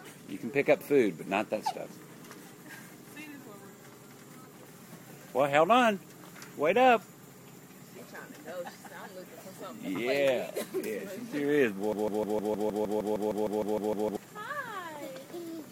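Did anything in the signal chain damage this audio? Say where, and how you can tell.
Yes. From 11.93 s to 14.17 s the audio turns into a broken-record loop: a 0.15 s fragment plays back to back 15 times, identical each pass, and whatever should have sounded across those two seconds is gone. The stage is likely a playback or stream buffer that stalled and kept resending its last block. A spectrogram shows the same slice tiled at a fixed 0.15 s spacing, and the waveform repeats sample-for-sample.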